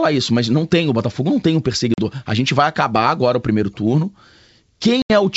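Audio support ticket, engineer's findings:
Block of digital silence at 1.00 s. A single tick, with a hole only about 1.6 ms long. Probable cause is the playback or output stage missing a buffer fill, so the sound drops hard to zero and back. There is no level shift or distortion after it, which separates it from the packet-loss events below.

Packet loss on an ADPCM call, 1.94–2.00 s. A 40 ms hard-edged hole, which fits a couple of lost packets. The G.722 decoder's predictor and step size are knocked out of step with the sender, so the audio returns with brief mistracking.

Packet loss on an ADPCM call, 5.02–5.13 s. An 80 ms hole, which points to about four lost packets, followed by a short recovery. Telling sign versus a silence block: the restart is wrong, not just the gap. The G.722 link runs at 64 kbit/s with no more than faint codec damage of its own.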